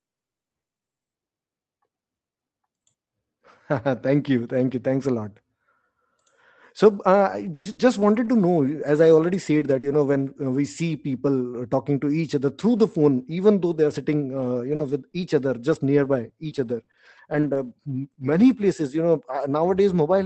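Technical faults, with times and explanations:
7.31–10.15 s, repeated packet loss (robotic sound): four dropouts totalling 240 ms, the longest 120 ms, come in quick succession just before "uh we see". The receiver stretches the last bit of sound over each hole, so this stretch turns choppy and a bit robotic.
13.71–18.41 s, scattered short gaps: between "even though" and "places you know" there are around ten tiny holes, 220 ms lost in all, none much past 40 ms. Each gets patched with the preceding sound, leaving brief ticks and smears.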